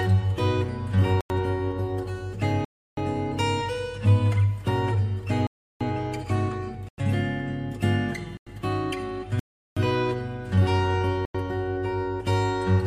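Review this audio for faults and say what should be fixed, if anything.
Blocks of digital silence hit at 1.21–1.30, 2.65–2.97, 5.47–5.81, 6.89–6.98, 8.37–8.47, 9.39–9.77 and 11.25–11.35 s. Each cuts hard to silence and back with no fade. The 93 ms holes fit a 4096-sample buffer going unfilled. To prevent this, give the audio thread more headroom or a larger buffer so output is always ready in time.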